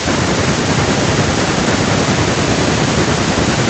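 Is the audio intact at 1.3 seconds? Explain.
No. At 1.3 s you're inside a feedback echo between two devices that runs from 0.56 s to 3.70 s. A second device replays the speech, the first device's mic grabs it again, and the echo canceller misses it, so each word returns about every fifth of a second, at most about 15 dB below the speech.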